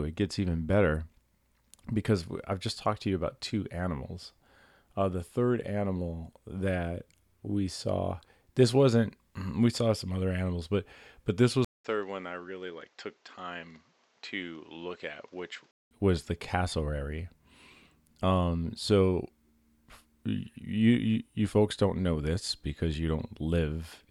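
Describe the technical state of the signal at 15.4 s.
At 15.4 s the speech is still inside a stretch from 11.65 to 15.91 s where the input likely switched to a poorer device. The change comes after "animals but but this", following a 200 ms silence. Nothing passes above 7.8 kHz, so the sound turns dull and boxy. The level drops by about 10 dB. A new noise floor sits roughly 35 dB below the signal. Full quality returns at "was the cassowary".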